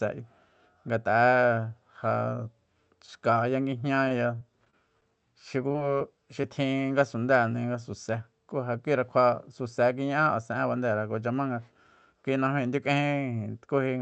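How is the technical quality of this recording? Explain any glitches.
The recording has audible network dropouts in its middle section. They come as one choppy stretch followed by four brief hiccups. The audio carries the mild coding character of a call codec, with the top end stopping near 8 kHz, which fits a wideband Opus stream at a moderate bitrate.

From 3.95 to 5.04 s there is repeated packet loss with a robotic sound. Seven separate gaps fall within about a second. The longest lasts about 24 ms. Each time, the receiver papers over the hole by extending the last stretch of sound. About 125 ms of the speech is synthetic fill, roughly an eighth of the span. Because the patches keep coming, the speech turns choppy.

Four short concealed packet losses follow. They fall at 5.68 to 5.72 s, 5.72 to 5.76 s, 5.98 to 6.02 s, and 6.42 to 6.45 s. Each replaces roughly 20 ms of missing audio. The decoder continues the preceding sound, using its pitch where voiced and shaped noise where not. 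It then crossfades back into real speech. Each one is heard as a quick smear or wobble. A short consonant can drop out.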